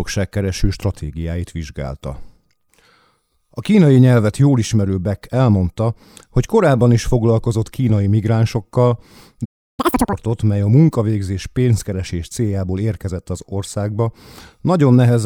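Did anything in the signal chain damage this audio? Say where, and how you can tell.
Yes. At playback, the player likely ran dry or its thread blocked: the speech cuts to silence from 9.45 to 9.80 s, a playback stall of about 0.33 s.

The player then resampled its backlog in a catch-up at higher speed: from 9.80 to 10.13 s the speech runs at twice speed, pitched up around 10 semitones.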